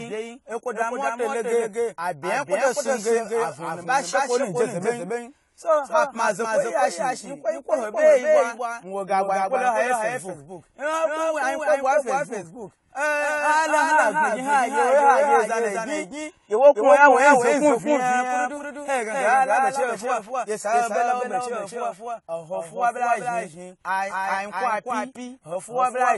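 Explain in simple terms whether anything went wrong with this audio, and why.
A doubled audio track runs through the whole clip: a second, somewhat quieter copy of the speech follows about a third of a second behind, likely from the sound being captured twice.

AAC compression is clearly audible throughout: the top treble above about 11.5 kHz is gone, leaving dull, smeared speech, likely from saving the file at low quality.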